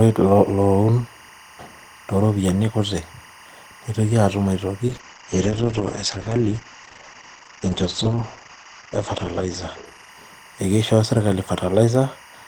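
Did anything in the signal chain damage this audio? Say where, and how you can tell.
Yes. In the analogue wiring, linear timecode has leaked into the speech path for the whole clip. A faint chirping warble switching near 1 and 2 kHz sits roughly 25 dB below the speech, its rhythm fitting 23.976 fps code crosstalk from an adjacent cable or track.

In call processing, the bitrate dropped from 4.93 s to 11.17 s after the call's bandwidth estimate fell. The top end collapses from 20 kHz to 8 kHz, and for about 4.43 s the speech turns coarse and watery, which suggests the encoder fell from around 32 kbps to about 9 kbps.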